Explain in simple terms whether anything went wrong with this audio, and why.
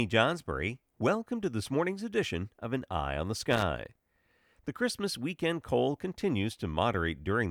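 A worn or dirty contact somewhere in the cable path briefly lost and regained its grip, a fault known as loose connector crackle. As the connection flickered on and off, the signal was chopped into fragments. You hear it as a short, irregular burst of scratchy crackling from about 3.48 to 3.63 seconds, right after the speaker says "on the", lasting roughly a seventh of a second.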